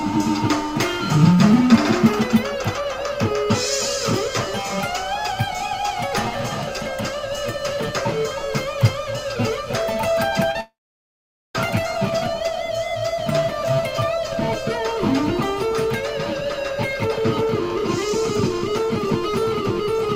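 Short concealed packet loss at 10.51 to 10.56 s: about 30 ms of audio failed to reach the decoder in time, and the receiver covered the gap with roughly 32 ms of synthesised continuation, extending the preceding sound before blending back into real audio. It comes across as a brief smear or wobble.

Long network dropout from 10.61 to 11.55 s, just 50 ms after the first glitch: the sound breaks off, a short fading continuation of the last sound is heard, and then about 0.83 s of silence follows before audio resumes. This is likely a network outage in which around 0.94 s of audio never arrived. The concealment could only stretch the final sound briefly before giving up, and when the audio returns, that missing stretch is simply gone.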